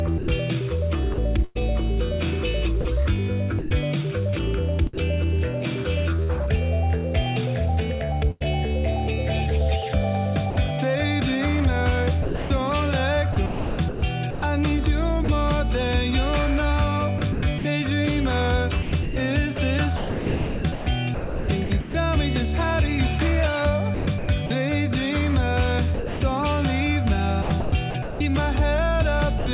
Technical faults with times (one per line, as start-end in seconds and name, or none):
0.18-6.31 sound chopped by the voice detector
8.31-8.42 burst of packet loss
10.50-10.56 sound dropped by the voice detector
12.22-15.28 sound chopped by the voice detector
17.18-21.94 sound chopped by the voice detector
23.94-24.50 sound chopped by the voice detector
25.94-29.46 sound chopped by the voice detector